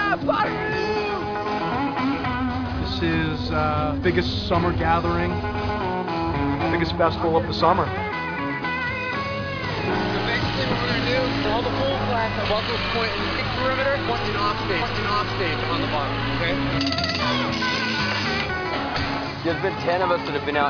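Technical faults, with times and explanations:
No technical faults detected.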